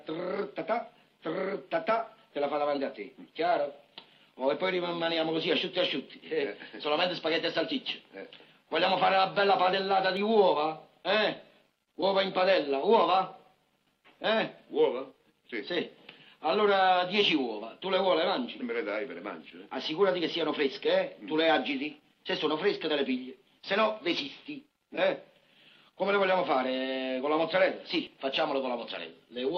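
Dropped buffers (overrun) at 10.17 s and again at 28.07 s: each is heard as a jump where the sound skips forward with no gap of silence. The likely cause is the capture software failing to read its buffer before the hardware overwrote it, so a short stretch, around 20 ms, is discarded and the audio on either side is butted directly together. The abrupt splice produces the sudden skip.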